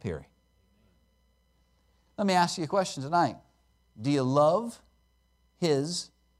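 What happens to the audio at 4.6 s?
Nothing goes wrong at 4.6 s; the speech carries on intact through that moment with no dropout, click, distortion or other fault.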